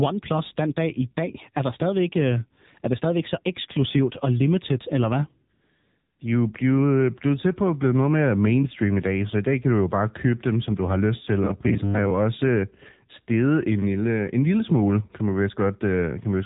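Speech passed through the AMR narrowband mobile codec for its full length. Nothing above 4 kHz survives, and the vocal-tract model, driven by sparse pulses in short subframes, leaves the voice plainly buzzy and synthetic, which fits a low AMR-NB mode around 7.4 kbps. From 5.54 to 6.20 s, between "og limited eller hvad" and "de er jo blevet", AMR comfort noise takes over for about 660 ms: speech frames stop, and the real background gives way to a smooth, steady synthetic hiss that switches in and out abruptly. From 11.44 to 12.10 s, between "du har lyst til" and "også øh steget en", the voice turns into a rigid metallic buzz at 100 Hz that still roughly tracks the syllables. This is robotic sound from repeated short buffers, likely caused by audio arriving too seldom, so the last 10 ms or so is replayed while roughly half of the real audio in that stretch is skipped.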